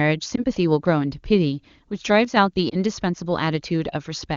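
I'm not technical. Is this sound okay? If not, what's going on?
No. Around 0.36 to 0.44 seconds and again at 2.69 to 2.76 seconds there are lost AMR speech frames: each time a single 20-millisecond chunk of the phone call's speech got garbled in transit, and the decoder filled the gap by guessing, so you hear a brief dip or warble.

At 2.25 to 2.37 seconds the sound suddenly gets noticeably quieter for about a tenth of a second, then comes back. That's likely one channel dropping out: one side of the stereo signal vanished briefly, so the combined sound lost some of its level.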